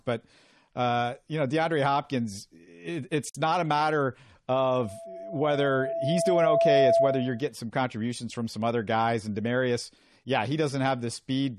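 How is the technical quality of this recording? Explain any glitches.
Two problems stand out in this speech recording: a short dropout where two encoded pieces were joined, and a stretch of loudspeaker feedback that takes over for a few seconds.

The gap at the join of encoded pieces comes at 3.30 to 3.35 s, right after "it it's" and before "not a matter." The speech breaks for about 51 ms and then picks up exactly where it stopped. That happens when separately encoded chunks are stuck together without trimming. Each encoder pass leaves its start-up delay and its final padded frame in place, so a hole opens in the middle of continuous sound, with edges the codec has smeared.

The loudspeaker feedback squeal runs from 4.52 to 7.50 s, starting just after "it's not a matter" and ending before "some contributions from some." A single tone at 669 Hz creeps in and swells over roughly two seconds until it sits around ten decibels above the speech. 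A mic was picking up the speaker it feeds, and at that one frequency the loop gain went past unity, so the tone kept feeding on itself.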